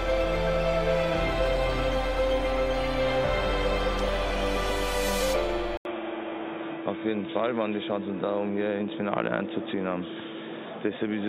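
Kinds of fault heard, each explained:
Input switched to a poorer device: at 5.77 s the sound drops out for 80 ms and comes back dull and boxy through to the end, with nothing above 3.8 kHz, a new noise floor about 35 dB below the signal, and no clear change in loudness. The likely cause is the recording input moving to another microphone or a headset's call profile. A spectrogram shows the upper band going abruptly empty after a thin vertical gap. The waveform has a brief flat stretch at the switch.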